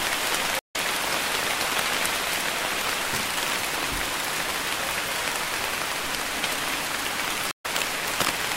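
At 0.59 s the sound cuts out for 153 ms, and it returns at 0.76 s. This is a stream reconnect. The connection dropped and the player restarted its decoder mid-stream. Playback picks up a little later in the material, roughly a tenth of a second on. The same thing happens at 7.51 s, with 129 ms of silence before the audio returns at 7.66 s. It again skips ahead by about a tenth of a second.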